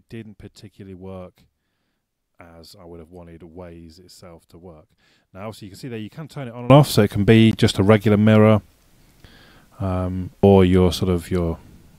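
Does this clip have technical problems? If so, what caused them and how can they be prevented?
Yes. From 0.0 to 6.70 s the sound collapses by about 21 dB, leaving a faint residue. The likely cause is one channel inverted: the opposite-polarity channels cancel their shared content when summed to mono. On a spectrogram the band is faint, and the waveform is visibly shrunken until it jumps back to full level. Checking polarity with a correlation meter before mixdown prevents this.

At 7.51 s there is a gap between stream segments: mismatched timestamps leave a hole that the player fills with about 17.7 ms of silence, which fits a segment boundary of roughly 4-second segments. The waveform shows a flat, hard-edged dropout, and the spectrogram shows a thin vertical blank stripe. Aligning segment timestamps so each segment begins exactly where the previous one ends prevents it.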